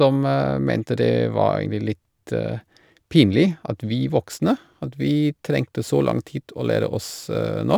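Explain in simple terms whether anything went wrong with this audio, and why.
From about 4.31 s to the end of the clip, the speech picks up a faint, gritty fizz that clings to the louder and brighter sounds. That's crude rate conversion: the audio was shifted to a different sample rate by simply dropping or repeating samples instead of filtering properly, which fits a jump from 48 kHz to 44.1 kHz. The skipped samples fall in a repeating pattern, and that creates tones that don't match the voice.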